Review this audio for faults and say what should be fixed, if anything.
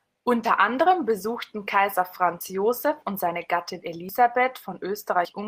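Dropped buffer (overrun) at 0.44 s, just before "anderem besuchten", and at 2.41, 4.09 and 5.25 s: each jumps ahead around 40 ms, likely from samples overwritten before being read. Enlarge the capture buffer or raise the recording thread's priority so it always collects samples in time.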